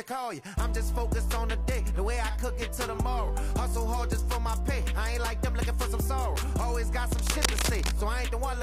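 Near the end, from about 7.10 to 7.94 s, there's a burst of cable scratch noise: dense, uneven scratching and rustling laid over the sound for nearly a second, and it's loud, sitting only a little below the main signal. It's likely a worn cable, connector or control being moved, with the contact resistance jumping around and spraying irregular noise into the path while it shifts.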